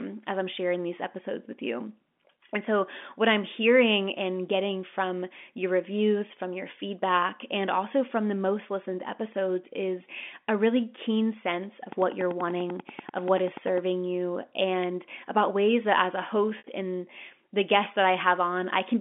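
From 11.92 to 13.79 s, a train of clicks ticks regularly about 10 times a second, around twenty sharp spikes peaking about 5 dB above the speech, likely interference or a faulty connection. They show as evenly spaced vertical lines on the spectrogram.

At 16.58 s, packet loss with pitch repetition leaves a 60 ms gap, consistent with three 20 ms packets, filled by a repeated pitch period that fades out over about 50 ms into brief silence before the speech returns with a short cross-fade, and that appears as repeating, decaying cycles in the waveform.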